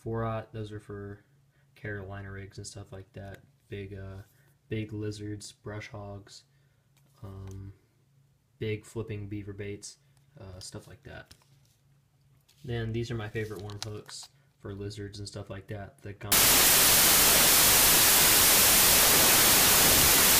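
From 16.32 s to 20.39 s comes a wrong sample width fault: 32-bit integer samples are read as 16-bit, so each splits into two values. The sound plays at half speed, an octave low, under loud noise. The waveform fills densely, and the spectrogram shows broadband noise with faint, lowered traces.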